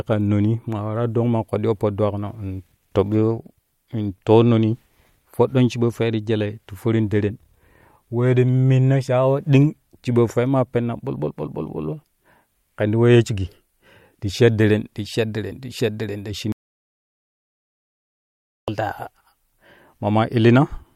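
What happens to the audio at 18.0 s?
At 18.0 s the speech sits inside an audio dropout to silence running from 16.52 to 18.68 s. The input signal was likely lost while recording continued writing silence, so about 2.16 s of speech vanishes into dead silence, with no room tone, before cutting back in.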